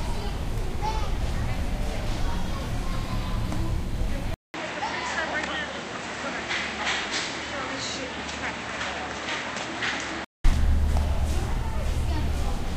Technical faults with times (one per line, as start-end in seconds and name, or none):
4.34-10.44 input switched to a poorer device